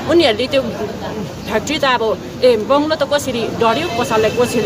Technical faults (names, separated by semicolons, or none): none